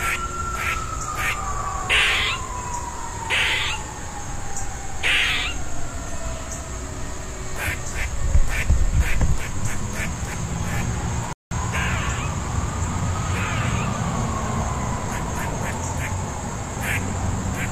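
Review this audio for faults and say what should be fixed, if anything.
A rebuffering stall occurs at 11.33 s, where the player exhausted its store of downloaded audio and had to halt playback until more data arrived. The sound drops abruptly to silence for about 184 ms and picks up again at 11.51 s from exactly the point where it stopped, so nothing is skipped or repeated, but the timeline stretches by that gap. To prevent it, keep a larger playback buffer ahead of the playhead, or lower the streaming bitrate when throughput falls.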